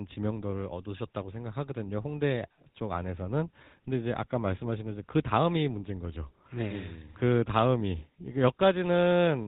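Speech carries GSM full-rate codec damage throughout, with a buzzy, gravelly roughness from regular-pulse excitation and nothing above 4 kHz, which fits a 13 kbps stream. Simple telephone band-limiting would sound dull but smooth, without that grainy buzz.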